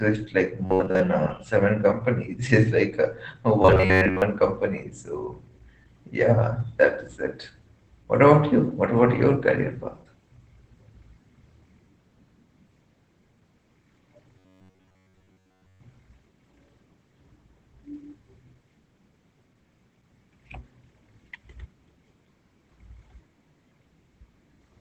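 Muffled, slightly hoarse speech runs through the whole recording, with a faintly robotic edge and no detail above about 8 kHz. This is Opus voice compression. The encoder appears to be in its SILK linear-prediction mode, which fits a low bitrate of around 12 kbps, and it keeps a wideband signal while coding the excitation coarsely, so the damage is plainly audible. Three times the speech also collapses into a rigid, metallic buzz pitched at about 93.8 Hz that still loosely tracks the words: from 0.65 to 1.01 s, from 3.62 to 4.22 s, and from 14.38 to 15.80 s. This is robotic sound from repeated short buffers, likely caused by audio arriving too late, so the player loops a slice of roughly 10.7 ms, one period of that buzz, and most of the real sound in those spans is skipped.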